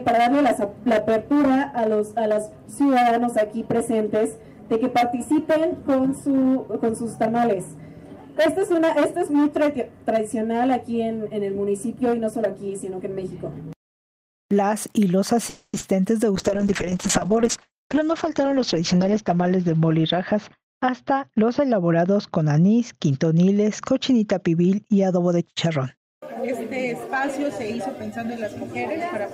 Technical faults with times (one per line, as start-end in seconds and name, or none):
15.49-15.75 call audio freeze
15.79-15.83 short concealed packet loss
16.36-26.02 call bitrate drop
17.79-18.82 jitter buffer speed-up
25.16-27.78 jitter buffer speed-up